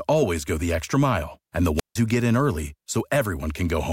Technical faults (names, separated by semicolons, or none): wireless microphone squelch dropout